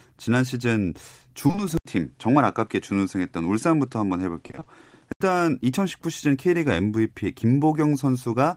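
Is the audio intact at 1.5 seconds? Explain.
No. From 1.47 to 1.59 s, three back-to-back stretches of short concealed packet loss occur, each about 20 ms of audio arriving too late for the decoder. The receiver extends the preceding speech to cover each gap, so the sound briefly smears or wobbles there.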